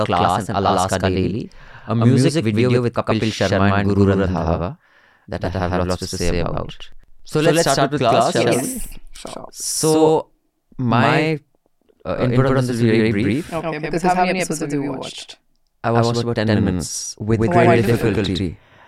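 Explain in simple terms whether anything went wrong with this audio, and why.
Something did go wrong: the whole speech clip has a doubled audio track. A second, equally loud copy trails about a tenth of a second behind, giving a clipped, slappy echo with no room feel. It's likely from a slower path capturing the sound twice.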